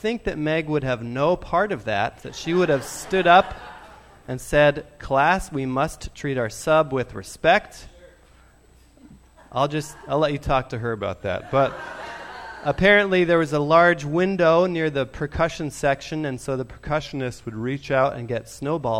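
From 10.98 to 12.03 s and again from 17.00 to 18.04 s, a drift correction step slows playback about 6% and drops pitch 107 cents, likely a clock-matching resampler jumping rate, then snapping back. Spectrogram harmonics step down together and return; the waveform stretches slightly.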